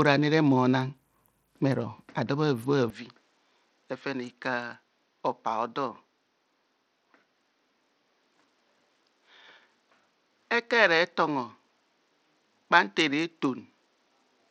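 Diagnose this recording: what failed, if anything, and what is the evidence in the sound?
Codec stage: from start to finish the speech carries a gritty quantisation noise, with treble that flickers or drops out and aliasing on top. This is likely Bluetooth SBC compression with a starved bit pool, which fits roughly 80 kbps, leaving the upper sub-bands short of bits.

Driver or device stage: at 2.90 s, with no gap, the sound turns duller and drops about 5 dB. Nothing remains above 7.7 kHz, and a new noise floor sits roughly 45 dB below the speech until the end. The likely cause is the input switched to a poorer device with a narrower band.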